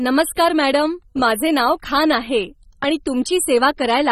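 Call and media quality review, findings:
Throughout: speech dull and smeared, nothing above 14.7 kHz, fizzy warble on sibilants and held vowels. Likely AAC compression (AAC-LC, consistent with roughly 24 kbps): coarse quantisation leaves spectral holes. A plain low-pass would lose the top band without the warbling.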